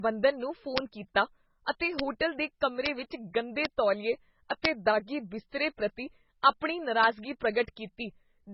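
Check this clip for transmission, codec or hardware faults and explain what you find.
Two faults are present.

The speech has nothing above 5.6 kHz throughout. It sounds dull and watery. This is low-bitrate audio saved at a high bitrate, likely a very low-bitrate MP3 re-encoded at a much higher rate. The second pass cannot restore what the first removed.

There is a bit error spike at each of six times: 0.78 s, 1.99 s after "ਕੀਤਾ ਅਤੇ", 2.86 s, 3.65 s, 4.65 s after "ਵਿੱਚ ਗੰਦੇ ਤੌਲੀਏ", and 7.04 s after "ਪ੍ਰਤੀ ਆਪਣੀ". In each, a flipped bit makes one or two samples jump and return. Each is heard as a single sharp, broadband tick.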